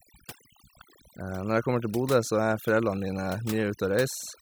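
Overdone noise removal runs through the whole speech clip. A noise reduction setting that is far too aggressive drives individual frequency bands down or out whenever they sit close to its noise estimate. Softer parts of the voice vanish along with the noise, leaving near-silent gaps sprinkled with twinkling specks.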